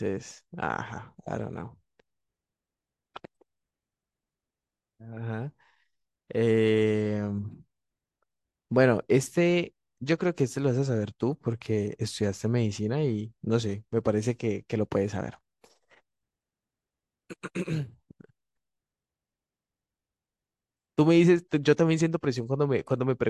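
No technical faults can be heard anywhere in the speech recording.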